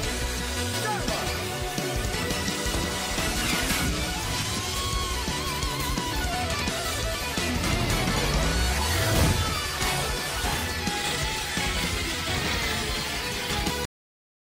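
Cut-off end at 13.85 s: the final buffers were never written, so the sound stops mid-event and drops straight to digital silence for the last 0.7 s, with no decay.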